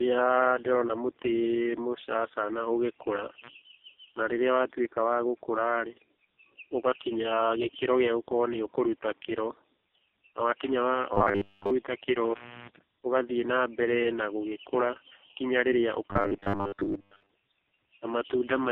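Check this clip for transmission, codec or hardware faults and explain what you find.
Three kinds of fault are present: tandem speech coding across the whole clip, one intermittent contact dropout, and two stretches of robotic sound.

Tandem speech coding runs throughout. The speech was encoded, decoded and encoded again by two low-rate narrowband speech coders in sequence, consistent with AMR-NB on both legs with a G.711-type link between them. The second coder compounds the first one's damage, leaving rough, muffled, warbly speech.

Intermittent contact occurs from 3.42 to 3.49 s. A connection briefly opens and the signal drops out for about 48 ms, with crackle at each edge where the contact breaks and remakes. Only faint residual noise fills the gap.

Robotic sound from repeated short buffers appears from 11.13 to 11.71 s and from 16.10 to 17.29 s. The speech becomes a rigid metallic buzz at 100 Hz that only loosely tracks the words. 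The likely cause is late audio delivery, with playback looping roughly 10 ms buffers over most of each stretch while the real audio is skipped.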